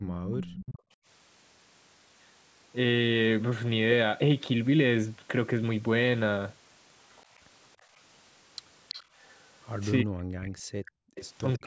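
From 0.00 to 1.06 s, the background is gated by the echo canceller. While the loudspeaker plays, the microphone is pulled down by up to about 25 dB for roughly 0.7 s in total, so the room sound dips and comes back. From 0.32 to 0.79 s, a faint copy of the speech trails 330 ms behind, about 15 dB below it. This is likely an echo leak, where loudspeaker sound picked up by the microphone got past the canceller and was sent back. The same 330 ms echo returns from 7.11 to 11.58 s. Between 7.78 and 9.15 s, the background gating recurs, dipping by up to about 16 dB for roughly 0.2 s. From 10.02 s to the end, the talker's speech drops out in pieces by about 40 dB, for roughly 0.7 s altogether. This is likely speech suppressed in double talk, with the canceller turning down both sides while they overlap. Within that stretch, from 10.85 to 11.15 s, the background is also gated away by about 40 dB.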